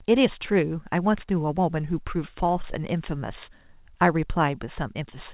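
No technical faults can be heard in this speech, which comes over a WebRTC call path with nothing above 4 kHz, as fits a G.711 A-law codec.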